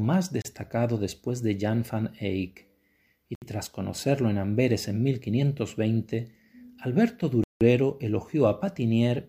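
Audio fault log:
0.42–0.45 s, 3.35–3.42 s, 7.44–7.61 s: Bluetooth stall, with hard silences of 28, 68 and 173 ms. Each gap most likely comes from a wireless buffer running dry while packets were delayed. Unlike a codec dropout or concealment, each gap is true silence, and the sound resumes where it stopped or slightly later.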